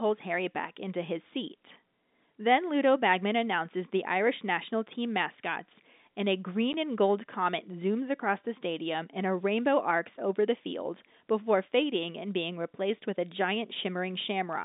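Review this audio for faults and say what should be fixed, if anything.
Packet loss filled with silence occurs at 6.73 s, between "team mascots and a" and "and gold comet zooms". The speech drops out for 10 ms. The gap has hard edges. This sounds like a single lost packet on the call. The receiver had nothing to play and inserted silence. The G.711 telephone band, roughly 200 Hz to 3.7 kHz, is heard on both sides of the hole. To prevent this, the receiver should conceal lost packets by extending the surrounding audio instead of inserting silence.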